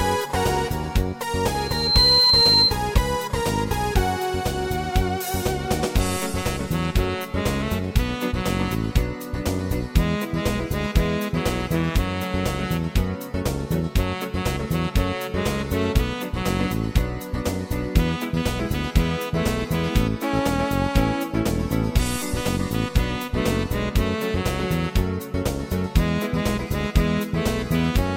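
At 1.50 s a loudspeaker feedback squeal starts. The microphone is picking up its own loudspeaker, and the loop runs away at 4.1 kHz. The tone swells over about half a second and peaks roughly 5 dB above the sound. It stops at 2.78 s.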